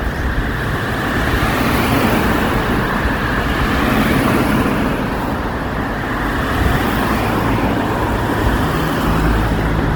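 Opus compression runs through the whole recording of sounds, from start to finish, and is plainly audible. Tonal parts come out rough, grainy and noisy rather than swirling, because the encoder's music mode preserves each band's energy but, short of bits, fills bands with folded lower content or noise. The full bandwidth survives, reaching about 20.2 kHz, yet the coarseness points to a low rate, likely around 16 kbps.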